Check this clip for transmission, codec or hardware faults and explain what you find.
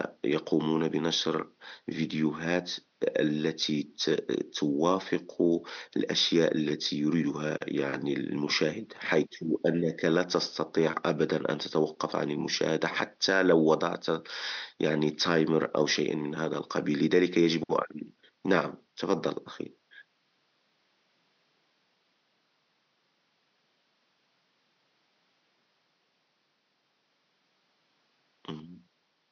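I find no transmission, codec or hardware faults in this clip.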